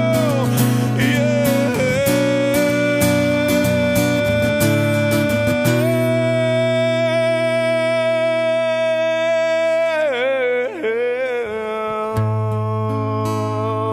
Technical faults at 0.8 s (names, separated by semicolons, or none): none